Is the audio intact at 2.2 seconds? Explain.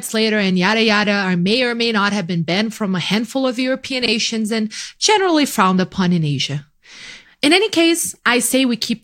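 Yes, at 2.2 seconds the speech plays through cleanly, with no dropout, click, distortion or other fault at that moment.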